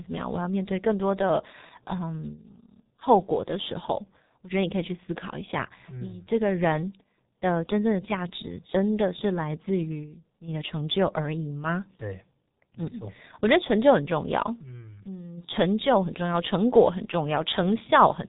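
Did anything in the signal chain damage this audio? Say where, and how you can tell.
Yes. At the codec stage, the speech passed through a G.723.1 codec and is heavily damaged throughout. Nothing is heard above 3.8 kHz, and the slow, coarse voice model leaves it muffled and hoarse with smeared consonants, which fits a rate of about 6 kbit/s.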